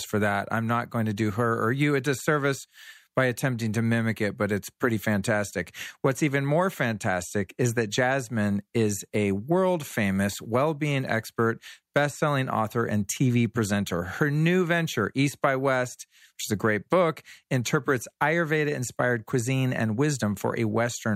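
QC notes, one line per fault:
No faults heard anywhere in this speech recording; nothing to log.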